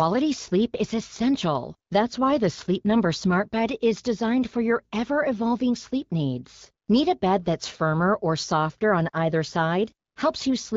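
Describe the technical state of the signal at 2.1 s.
At 2.1 s the speech is intact, with no fault present, and the AMR wideband (HD Voice) coding heard there sounds as clear as expected at a rate around 12.65 kbit/s.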